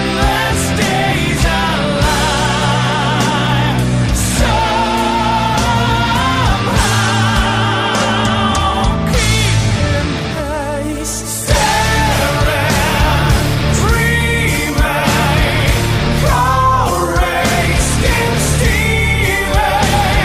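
Throughout the clip the sound is dull and plainly gurgling, with a granular roughness on sustained parts. The likely cause is MP2 compression at a low rate, which fits roughly 80 kbps. With too few bits, the encoder shuts off upper sub-bands and coarsely quantises the rest. On a spectrogram the top end stops at a hard ceiling, and blocks of energy just beneath it blink on and off from frame to frame.

From 1.65 to 1.76 s, a short burst of DAB burbling adds a few watery blips over the sound. Bit errors have slipped past error correction and corrupted sample values and scale factors, so individual sub-bands jump in level for a frame at a time. This fits a handful of damaged frames at a very low error rate. A spectrogram shows isolated horizontal slabs flaring in narrow bands, and the waveform carries small irregular bumps.

From 4.29 to 4.48 s the DAB burbling returns, longer and denser. 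The error rate here is noticeably higher, and the span suggests about ten corrupted frames. More sub-bands misbehave at once, some leaping in level. On a spectrogram this looks like a patchwork of bright, frame-length rectangles scattered across the frequency range. The waveform shows jagged envelope spikes that don't follow the underlying signal.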